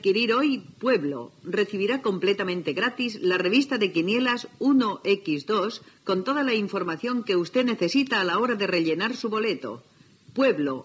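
No technical faults are audible.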